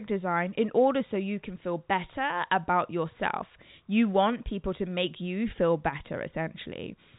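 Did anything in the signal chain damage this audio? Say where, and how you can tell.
No, nothing in the chain damaged this speech. It went through G.711 telephone coding, which fits a 64 kbps mu-law path: the audio stops at about 3.8 kHz, and any quantisation noise riding under the signal is faint at most.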